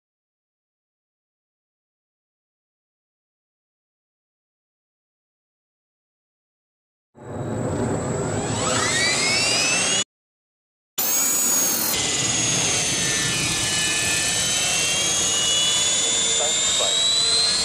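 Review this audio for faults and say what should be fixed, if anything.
A playback stall, most likely from the player running out of buffered data or its output thread being blocked, cuts the sound off at 10.02 s. The output stays silent for about 0.95 s, then resumes at 10.99 s. Keeping a larger playback buffer and running the audio thread at a priority high enough that other work cannot block it would prevent this gap.

Catch-up at higher speed follows. The player resamples its backlog to make up for the stall, so from 10.99 to 11.93 s the sound runs at twice normal speed, with pitch raised by around ten semitones, before dropping back to normal. Absorbing the delay gradually with very small rate changes, or simply accepting the added latency, would avoid this audible speed-and-pitch jump.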